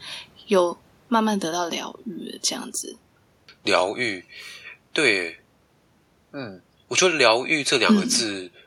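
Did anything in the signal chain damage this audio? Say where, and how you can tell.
No, the signal chain left no audible damage on this speech, and the only thing beneath it is the room's own background noise, sitting about 40 dB below the voice level and captured by the microphone as part of the recording.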